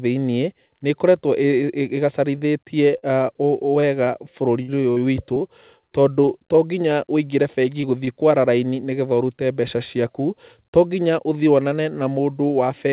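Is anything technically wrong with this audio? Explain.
Yes, there are packet-loss problems in this speech clip.

Short concealed packet loss happens at 2.38–2.45 s, 2.98–3.04 s, 7.81–7.85 s and 8.05–8.09 s. Each time, tens of milliseconds of audio went missing and got patched by extending the previous sound, so you hear a quick smear or wobble.

Repeated packet loss (robotic sound) runs from 3.80 to 6.29 s. Seven gaps, the longest 58 ms, are each patched in turn, and that stretch comes out choppy with pieces missing.

The narrow, phone-like band with nothing above 4 kHz is the normal sound of the call codec, which fits G.711 mu-law.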